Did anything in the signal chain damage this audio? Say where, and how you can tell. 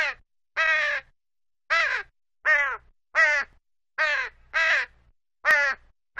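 Yes. Overlap between stream segments at 3.53 s and 5.51 s: two brief skips, about 2 s apart, matching 2-second segments. At the streaming and playback stage, overlapping segment timestamps made the player trim about 6 ms and 19 ms of undoubled sound, so the waveform jumps at each boundary.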